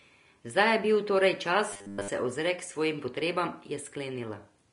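From start to end the speech carries the grainy, hissy texture of low-bitrate Vorbis compression, most likely the cause here, with damage plainly audible. Nothing survives above 10.6 kHz, and the treble that remains is quantised so coarsely that detail turns into noise, roughening tones and softening consonant attacks. The sound points to a bitrate of around 35 kbps. A spectrogram shows a flat ceiling at 10.6 kHz and speckled, blotchy energy beneath it instead of clean harmonic lines.

From 1.71 to 2.08 s the speech becomes a rigid, metallic buzz, robotic sound from repeated short buffers. The likely cause is incoming audio running late, so playback loops a 10 ms slice over essentially the whole stretch while the real audio is skipped. That repetition imposes a fixed 100 Hz buzz. The waveform shows an identical short cycle tiled across the span, and the spectrogram shows evenly spaced horizontal harmonics at multiples of 100 Hz.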